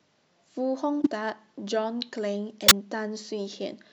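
At 1.02–1.07 s and 2.61–2.72 s, a corrupt frame decoded: damaged compressed frames were played anyway, misplacing spectral energy and producing brief chirps, squeaks, blips or bursts of noise, with error peaks around -10 dBFS.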